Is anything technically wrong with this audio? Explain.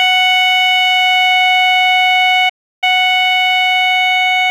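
Yes. At 2.49 s the music cuts to silence for about 0.33 s, then picks up again at 2.84 s. This is a playback stall: the player likely ran out of buffered data or had its output thread blocked, so nothing reached the output until it recovered.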